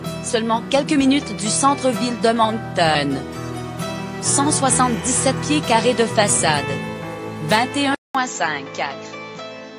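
At 7.95 s the sound drops out for about 200 ms, then returns duller and a little quieter, with a new noise floor well below the signal. This is likely an input switched to a poorer device mid-recording.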